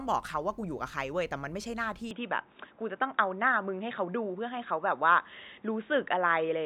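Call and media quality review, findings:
Speech dulls abruptly at 2.11 s through the end, with no gap at the change. Input switched to a poorer device, likely a headset call-profile mic. Spectrogram: energy stops at 3.8 kHz. Waveform: level steps about 5 dB, with a faint new noise floor.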